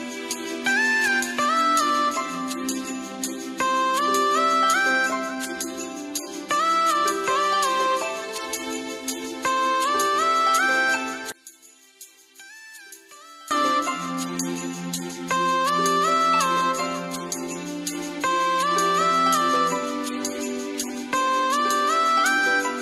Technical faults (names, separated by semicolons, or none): one channel inverted